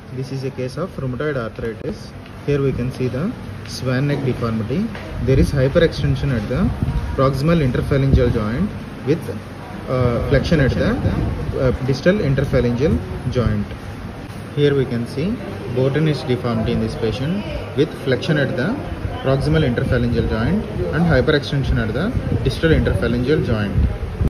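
A doubled audio track runs from 9.97 to 11.67 s, most likely because the same signal reached the mix twice, once directly and once through a slower path, leaving two copies out of step. The second copy trails by roughly a third of a second and sits about 10 dB below the first, full-band and dry, with no decay or room colour. It cuts in and out abruptly, giving a distinct, flat repeat behind the original.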